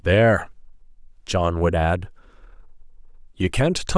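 No technical faults can be heard in this recording.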